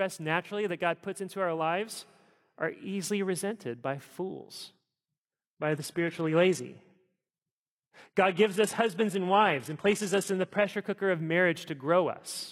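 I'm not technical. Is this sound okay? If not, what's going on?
No, not entirely. Right after "easily resented by fools", at about 4.73 s, the speech suddenly turns duller and a bit synthetic, with a watery, processed edge, and it stays that way for six seconds until about 10.73 s, just before "cooker of". That's an adaptive stream at a lower bitrate: the connection slowed, so the player switched to a smaller, lower-quality version of the audio rather than stopping, then switched back without any gap.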